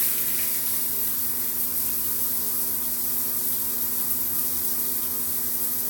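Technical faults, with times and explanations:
No technical faults are audible anywhere in this audio.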